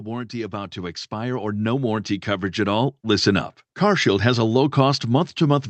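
From 0.31 s to 3.33 s the speech and the background behind it swell together, climbing by about 11 dB over roughly three seconds. This is automatic gain rising: the gain control judged the input too quiet and raised its gain gradually, lifting everything it received at once. The audio also passed through a WebRTC call path, and its Opus coding stops near 8 kHz, so nothing is heard above that band throughout.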